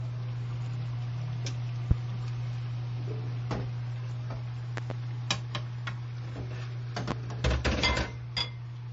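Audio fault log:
Throughout: low-bitrate audio saved at a high bitrate. Nothing is present above about 7.7 kHz, and the band below carries the artefacts of heavy MP3 coding. This most likely comes from a low-rate MP3 encode, consistent with roughly 34 kbit/s, later re-saved as a large MP3 near 187 kbit/s. The second pass could not restore the discarded detail. It kept the first encoder's cut-off and artefacts and added almost nothing audible.
1.91–1.94 s, 4.77–4.93 s, 7.11–7.14 s: loud pop. Each is a sharp, brief transient on top of the sound, which continues underneath. The first peaks about 25 dB above the surrounding audio, the third about 20 dB. The middle event is a pair of pops in quick succession, about 15 dB up. The likely cause is a sudden voltage step or pulse entering the chain, shaped by the following circuitry.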